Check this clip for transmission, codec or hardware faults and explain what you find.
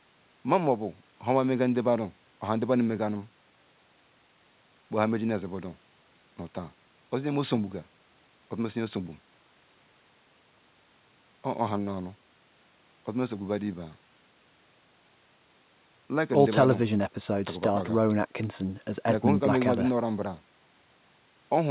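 No faults found in this speech.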